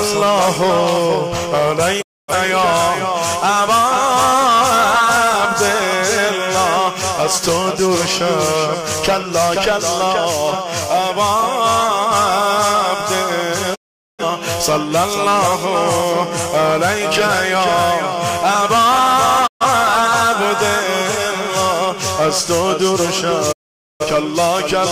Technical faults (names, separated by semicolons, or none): digital broadcast dropout